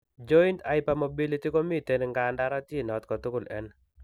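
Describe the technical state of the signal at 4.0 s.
At 4.0 s the speech signal is intact, with no audible technical fault at that moment.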